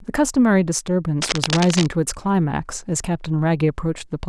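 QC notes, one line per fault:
1.20 to 1.88 s, cable scratch noise: a dense, ragged burst of scratching and rustling sits over the speech for about 0.7 s, only a little quieter than the talker. It's likely a worn cable or connector being moved, its contact flickering and spraying noise into the signal.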